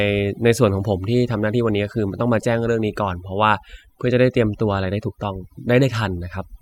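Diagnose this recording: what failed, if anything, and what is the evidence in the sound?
Overdone noise removal at the call-processing stage runs throughout the speech. Background falls away, breaking up into twinkling specks, and quiet parts of the voice are lost as frequency bands near the noise estimate are gated away. A spectrogram shows isolated bins flickering on and off.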